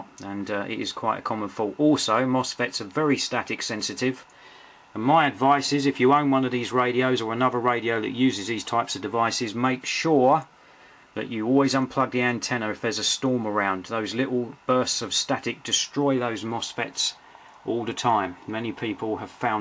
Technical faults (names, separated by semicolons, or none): none